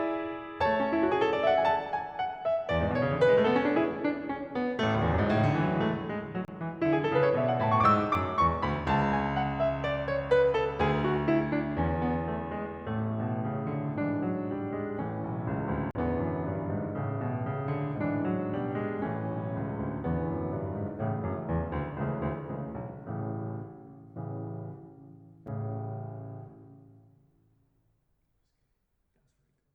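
The music drops into blocks of digital silence at 6.45–6.48 s (30 ms), 8.15 s, 15.91–15.95 s (40 ms) and 25.47 s. Samples are zeroed with no fade, so the shorter gaps tick and the longer ones pop as brief holes. Each appears as a flat-line waveform gap and a vertical spectrogram stripe.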